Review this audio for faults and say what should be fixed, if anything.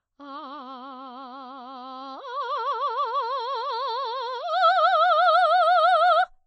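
Lossy coding damage, plainly audible throughout the music: the treble stops dead at 8.4 kHz, and quiet detail turns watery as weak frequency lines drop in and out between frames. The likely cause is MP3 compression, which fits a starved bitrate around 32 kbps. To prevent it, re-encode from the original source at a much higher bitrate or keep the file lossless.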